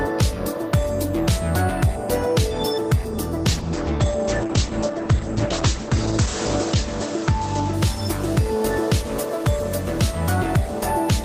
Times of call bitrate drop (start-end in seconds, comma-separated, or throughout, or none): 3.48-7.89